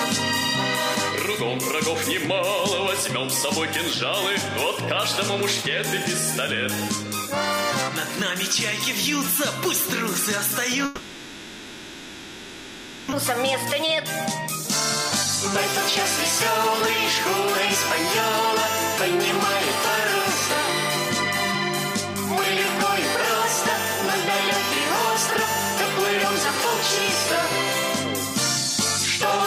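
From 10.85 s to 13.14 s the sound is replaced by about 2.3 s of fill that stretches the last sound into a fading buzz, never dropping to silence. This is likely a long network dropout: 1.6 s of audio is lost, and playback resumes roughly 0.7 s later.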